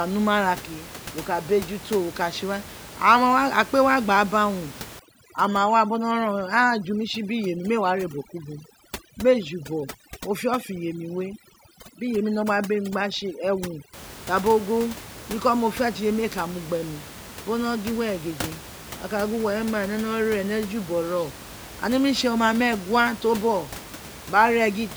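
From 4.99 s to 13.93 s the speech carries overdone noise removal: a noise reducer pushed too hard pulls individual frequency bands down to nothing wherever they sit close to its noise estimate. The room noise, about 16 dB below the speech before and after, collapses into near silence sprinkled with twinkling specks, and the softer parts of the speech vanish with it. Unlike a gate, which mutes everything at once, this removes isolated bands, which is what makes the residue sparkle.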